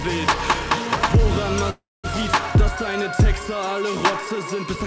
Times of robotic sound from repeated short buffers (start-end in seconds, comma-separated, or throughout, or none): none